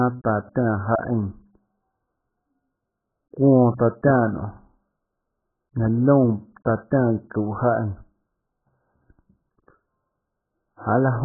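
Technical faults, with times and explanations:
Throughout, AAC compression: muffled, smeared speech with nothing above 1.8 kHz and a warbling texture, likely from heavy AAC-LC coding that fits a bitrate near 8 kbps.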